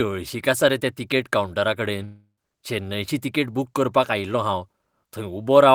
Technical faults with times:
2.04-2.38 long network dropout

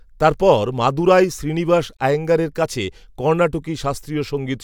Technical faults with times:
1.97-2.00 gap at a join of encoded pieces

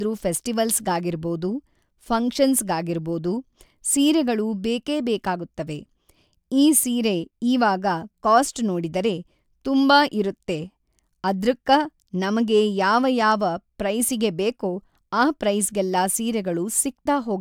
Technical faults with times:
none

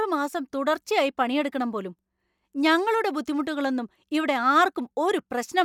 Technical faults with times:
none

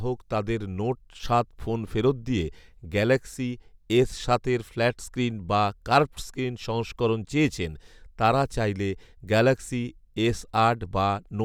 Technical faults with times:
none

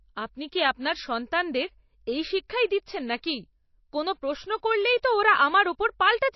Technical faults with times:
0.00-6.35 MP3 compression

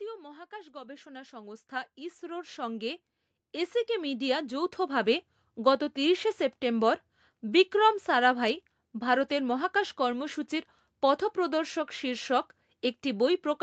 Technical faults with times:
0.49-3.08 automatic gain rising
3.86-5.30 automatic gain rising

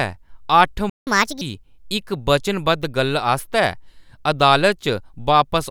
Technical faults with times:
0.89-1.07 playback stall
1.07-1.41 catch-up at higher speed

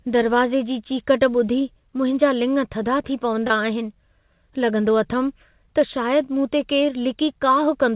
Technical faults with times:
3.47-3.53 short concealed packet loss

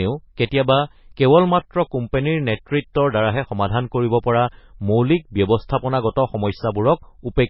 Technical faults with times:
0.00-7.50 low-bitrate audio saved at a high bitrate

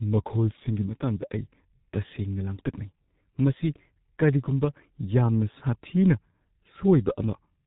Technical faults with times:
0.00-7.66 G.723.1 codec

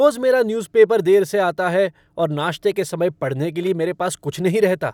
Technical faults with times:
none

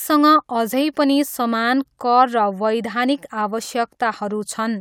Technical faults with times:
none

